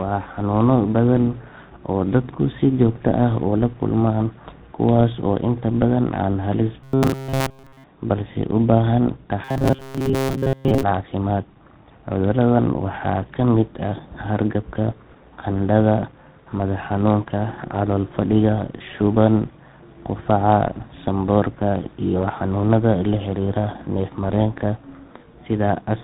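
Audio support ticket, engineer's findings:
Robotic sound from repeated short buffers, 6.84–7.85 s (throughout, before "balse u baahan") and 9.44–10.83 s (mostly, after "balse u baahan"). Metallic 134 Hz buzz, fitting a ~7.5 ms block looping; likely buffer starvation. Spectrogram: rigid 134 Hz harmonic comb. Waveform: identical repeating cycles.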